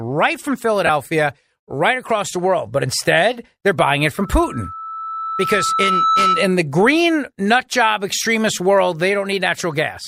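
Around 0.87 to 0.89 s there's a brief spot of lost LE Audio frames: about 22.5 ms gone, which fits roughly three LC3 frames. The decoder patches it with a noisy, smeared copy of the preceding spectrum. At 4.2 s a loudspeaker feedback squeal starts. A 1.3 kHz tone swells over about two seconds until it sits roughly 5 dB above the speech, then it stops at 6.63 s.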